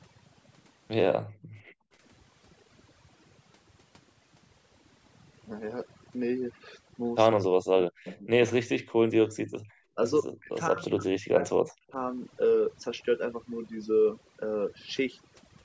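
From start to finish, a noise reduction stage set far too aggressively is at work. This is overdone noise removal: whenever a frequency band sits close to what the processor takes for noise, it is pulled down hard or switched off, and the softer parts of the speech go with it. The background falls to near silence scattered with twinkling specks.

At 1.22 s the echo canceller clamps down on the microphone while the far-end loudspeaker is active, and the background is gated by the echo canceller until 1.92 s. The room sound drops by about 40 dB, leaving a hole roughly 0.7 s long, then returns once the canceller releases.

From 7.36 to 8.29 s the speech is suppressed in double talk. Both ends are likely talking at once, and the canceller, unable to tell the near talker from the loudspeaker echo, turns everything down. The voice sinks by something like 40 dB in pieces, adding up to well over half a second.

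Inside that stretch, from 8.06 to 8.20 s, there is an echo leak. The remote loudspeaker's sound was likely not fully removed by its canceller and was sent back. A faint copy arrives 158 ms late, roughly 20 dB under the speech, as a brief scrap.

Brief double-talk dips follow at 8.48 to 8.56 s and 8.78 to 8.86 s, each a short deep bite out of the voice. At 9.52 to 9.67 s the background is gated again, a short gap of about 40 dB. The longest suppression runs from 10.22 to 11.81 s, where the speech repeatedly drops away by a similar depth for about a second and a half in total. The call microphone processing is also audible, with nothing above 8 kHz.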